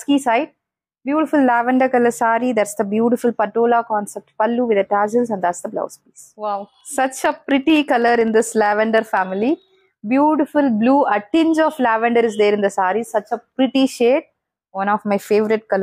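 Between 6.68 and 10.0 s there's a run of periodic USB or driver dropouts: something in the background stalls the bus or driver every 64 ms, and a tiny slice of audio, well under a millisecond, gets skipped each time. That adds up to about fifty regular little ticks.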